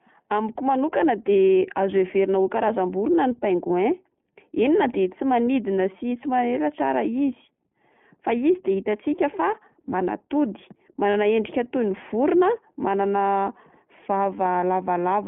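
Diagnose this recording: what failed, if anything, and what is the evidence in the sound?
The codec stage is at fault: the speech is narrowband throughout, with nothing above about 3.4 kHz and little below 150 Hz, and has the slightly rough, synthetic texture of the iLBC codec. The damage is plainly audible. Unlike plain band-limiting, the voice itself sounds coded, which fits iLBC's 20 ms mode at about 15 kbps.

Network loss shows as lost iLBC frames: brief held, buzzy vowel-like patches at 3.68 to 3.70 s (20 ms, fitting one frame) and 11.10 to 11.15 s (40 ms, fitting two). The decoder repeats the last pitch cycle with noise. Unlike a dropout, there is no silence, and speech recovers immediately afterwards.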